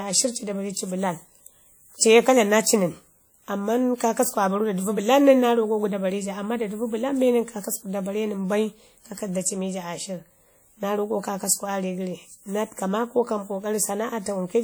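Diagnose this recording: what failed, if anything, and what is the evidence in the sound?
WMA compression throughout, codec stage: plainly audible ringing, washy speech with hiss breathing with the signal, likely a long-block transform encoder near 48 kbps.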